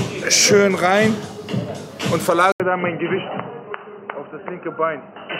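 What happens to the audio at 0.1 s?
Nothing goes wrong at 0.1 s: the audio plays through that moment intact, with no dropout, click or other fault.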